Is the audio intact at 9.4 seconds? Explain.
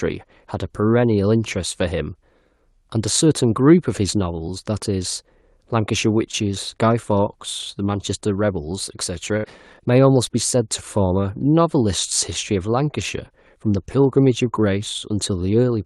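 No, there's a burst of packet loss right there, from about 9.37 to 9.46 s. A short run of the call's audio packets never showed up in time, so the receiver filled roughly 65 ms by stretching the last bit of speech and fading it down. That gives a brief buzzy or hissy smear. Then about 60 ms of speech is simply skipped when the audio picks back up, under the usual band-limited sound of a call codec topping out around 12 kHz.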